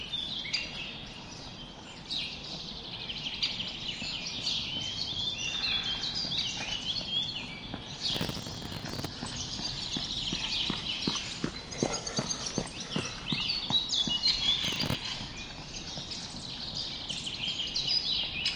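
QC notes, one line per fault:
8.15–9.06 s: processor overload crackle. A gritty, tearing burst rides on the sound for almost a second. The processor missed many buffer deadlines in a row. Each miss replayed a scrap of old audio with hard edges. The rapid clicks fit very short buffers of a few milliseconds, missed dozens of times.
14.64–14.95 s: processor overload crackle. A shorter burst with the same cause. Fewer deadlines were missed, so the grit lasts about a third of a second.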